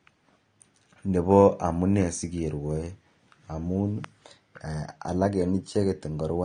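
From start to end the speech sounds dull and smeared, with a fizzy, warbling edge on sibilants and held vowels, likely AAC compression at a bitrate around 32 kbps. Unlike a plain low-pass filter, the top is patchy and swirling rather than cleanly cut.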